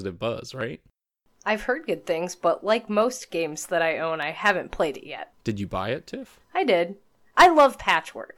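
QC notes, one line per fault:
0.61–7.84 s, clock drift buffer slips: a click recurs every 0.6 s, around fifteen in all, likely from two devices on separate clocks about 300 ppm apart, each slip dropping or repeating a handful of samples. The waveform shows step discontinuities, and the spectrogram shows evenly spaced thin vertical lines.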